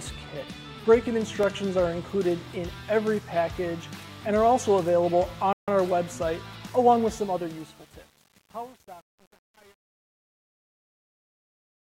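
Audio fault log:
1.43–1.46 s, loud pop: a single sharp pop about 15 dB above the surrounding sound, which continues underneath; likely a voltage pulse from a plug, switch, static or driver glitch.
5.53–5.68 s, rebuffering stall: the sound drops to silence for 150 ms, then resumes exactly where it stopped, because the player ran out of downloaded audio.
7.00 s to end, truncation distortion on a fade: the fade keeps only 8 bits without dither, so from 7.2 s onward the quiet waveform becomes coarse steps and sounds gritty.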